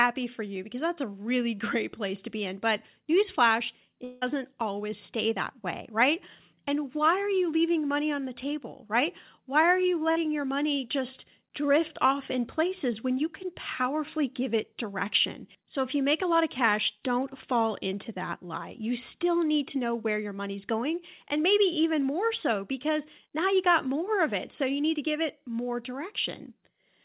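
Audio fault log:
4.04–4.24 s, long network dropout: just before "always stay that way", about 0.18 s of audio is lost and replaced by a fading buzz rather than silence. Likely the receiver kept extending the last sound after the stream stopped. On a spectrogram, the harmonics smear into a blurred, decaying band beneath the 4 kHz ceiling of the G.711 path. The waveform shows a smoothly shrinking envelope.
10.12–10.18 s, short concealed packet loss: between "are you" and "your money just drift", about 40 ms never arrived. The decoder bridged the hole by continuing the preceding sound, so it comes across as a brief smear. A spectrogram shows a short patch of stretched, featureless harmonics, and the waveform has a slightly flattened, repetitive stretch.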